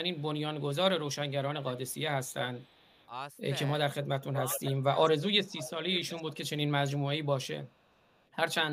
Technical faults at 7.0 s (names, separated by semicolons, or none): speech suppressed in double talk